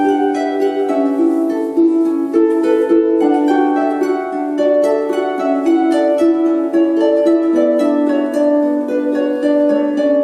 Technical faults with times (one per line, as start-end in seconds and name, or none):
none